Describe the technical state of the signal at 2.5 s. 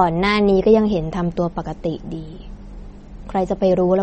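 At 2.5 s the speech carries MP3 compression damage, present throughout. Nothing sounds above 8.4 kHz, and sparse frequency lines flicker watery, likely from a low bitrate near 32 kbps.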